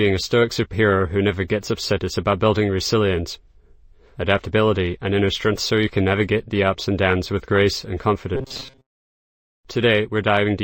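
From 8.35 to 9.31 s, robotic sound from repeated short buffers appears. The sound becomes a rigid, metallic buzz near 133 Hz. Likely cause: looping a roughly 7.5 ms buffer.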